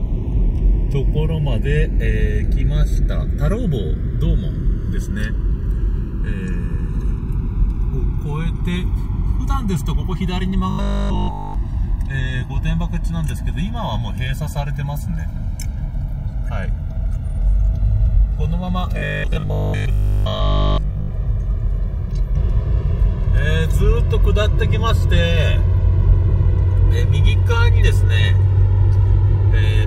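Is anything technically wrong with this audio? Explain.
Yes. Channels drifting apart, throughout: the two channels run on separate clocks about 70 ppm apart, so their delay slides to roughly 2 ms, sweeping comb notches like slow flanging.

Robotic sound from repeated short buffers, 10.70 to 11.54 s and 18.98 to 21.12 s: likely starved buffers repeating 20 ms chunks, giving a rigid 50 Hz metallic buzz.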